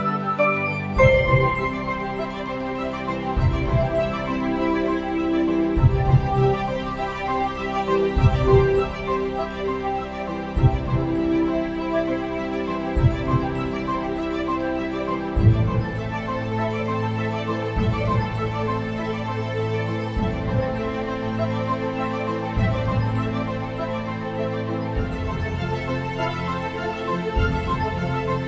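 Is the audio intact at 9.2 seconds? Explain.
No. A noise suppressor applied to music or sounds runs throughout. It treats held tones and tails as noise, dipping them a few decibels, so the sound pumps and thins.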